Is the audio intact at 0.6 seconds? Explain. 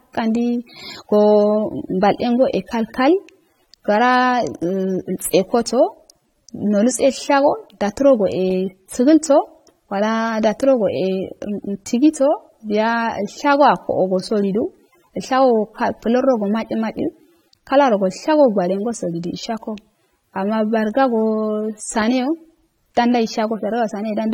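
No. At 0.6 s, as throughout, the sound shows two layers of smearing and swirl with nothing above 18 kHz, likely transcoding between lossy codecs, fitting 32 kbit/s AAC-LC re-encoded as HE-AAC. A single codec would leave only one kind of artefact.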